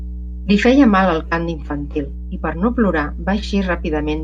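Mains hum runs throughout the speech, a steady 60 Hz tone sitting about 10 dB below the signal, where a ground loop or nearby transformer couples the power line into the audio.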